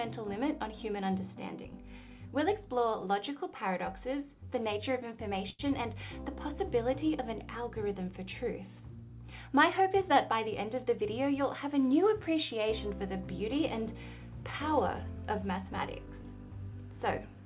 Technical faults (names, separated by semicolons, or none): short stall from a late packet